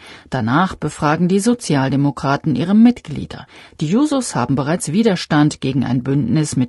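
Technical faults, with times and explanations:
Throughout, low-delay AAC compression: the speech sounds rough and grainy, with noise between harmonics, likely AAC-ELD's short frames starved of bits, fitting roughly 32 kbps.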